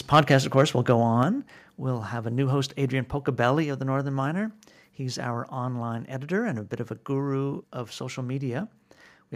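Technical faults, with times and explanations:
0.13 to 0.63 s and 0.89 to 0.92 s, microphone overload: the loudest speech peaks flatten against the converter's ceiling, about 4 dB over in the first stretch and about 1 dB over in the second, with roughly 2 percent of samples cut. The likely cause is input volume set too high, and the sliced-off peak tops add a harsh, crackling edge.
1.23 s and 3.63 s, microphone volume stepped down: speech and background drop together in a single abrupt step, by about 5 dB at the first point and about 3 dB at the second, just before "of the". This is likely call software reacting to the earlier overload by cutting the device's input gain at once.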